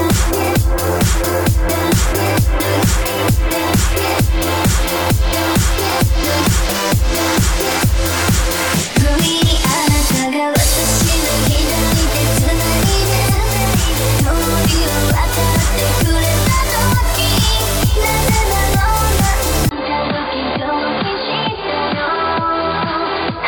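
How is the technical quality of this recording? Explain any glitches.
The recording holds up until 19.69 s, where a 20 ms gap is followed by duller, boxier sound with nothing above 4.8 kHz, roughly 5 dB quieter, and a faint new noise floor through the end. This is likely an input switched to a poorer device with narrower bandwidth.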